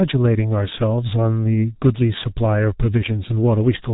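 G.723.1 codec damage runs from start to finish of this short speech recording, and it is heavy. Nothing reaches above 3.8 kHz, so the sound is muffled, and the hoarse, smeared quality with blurred consonants fits a bitrate near 6 kbit/s. The codec splits the signal into 30 ms frames and refreshes its model of the vocal tract only once per frame, so fast articulation is averaged away rather than reproduced.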